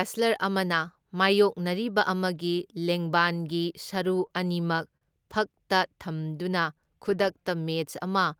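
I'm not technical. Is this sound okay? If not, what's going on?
No. Two connection problems show up in this speech.

From 3.95 to 5.03 s there are repeated stalls (stutter). The audio arrived late over the network, so the player briefly ran out six times and filled each pause by stretching the last bit of sound, the longest for 42 ms. Unlike a dropout, nothing is lost. Unlike the slow-down later, it comes as separate small hiccups rather than one smooth drag.

From 5.88 to 6.80 s there is a jitter buffer slow-down. The player was building up a safety reserve, so it repeated tiny slices of the speech, adding 77 ms and playing that stretch at 93% speed. Sounds feel drawn out, maybe with a slight wobble, but the pitch stays the same, which is how it differs from a recording simply played too slowly.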